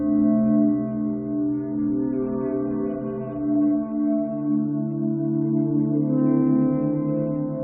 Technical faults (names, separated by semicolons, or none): none